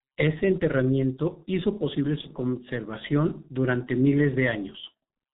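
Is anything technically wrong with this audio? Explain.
Yes. Throughout, the speech carries G.723.1 codec damage. Nothing above 4 kHz, hoarse slow-tracking timbre and smeared consonants fit a rate near 6 kbit/s, unlike plain low-pass muffling.

From 2.21 to 2.30 s, VoIP packet loss concealed by the speech codec extrapolates the last pitch and filter into a brief, fading stretched sound. This fits one lost 30 ms frame, not a silent dropout.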